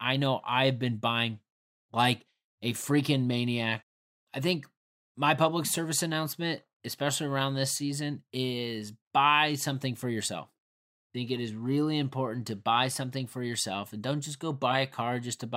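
Nothing stood out as a technical problem on listening to this speech recording.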